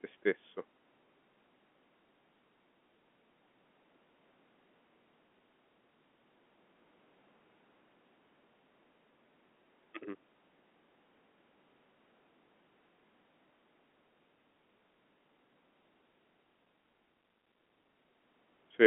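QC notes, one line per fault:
The speech comes through a standard G.711 telephone coding path, with the narrow telephone band of roughly 200 Hz to 3.4 kHz, and nothing in the signal departs from what that line normally delivers.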